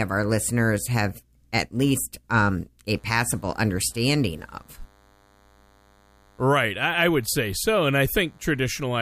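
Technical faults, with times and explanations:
2.94–9.02 s, DECT cordless phone buzz: from "have at least um" onward, a faint, thin 100 Hz buzz, from nearby radio bursts every 10 ms rectified by the audio circuit.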